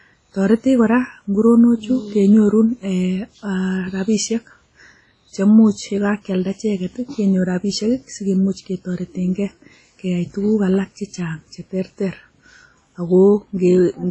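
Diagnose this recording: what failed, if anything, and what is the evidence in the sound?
The codec stage failed: the speech has been squeezed through a lossy transform encoder, most likely WMA compression at a low bitrate, and the damage is heavy throughout. Nothing survives above about 10.3 kHz, which fits a rate around 24 kbps. Long transform blocks smear quantisation noise across tens of milliseconds, so the speech rings and turns washy, while weak spectral detail is zeroed and a hiss swells and fades with the signal.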